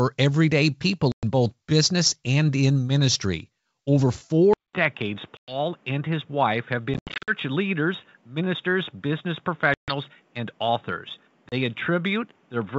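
Packet loss on an ADPCM call first hits at 1.12 s, a hard 110 ms hole right before "both business and in". The decoder's predictor and step size lose track of the sender's, so the speech comes back slightly distorted. At 4.53 s there's a 200 ms silence, and from there to the end the sound goes dull and boxy, with nothing above 3.8 kHz. It's a bit quieter and has new background noise well below the speech, which points to the input likely having switched to a poorer device. The packet-loss holes keep coming after that: 110 ms at 5.37 s, scattered gaps from 6.94 to 7.35 s, about 140 ms at 9.74 s, and a short 30 ms dropout at 11.49 s. Each one is followed by the same slightly distorted recovery.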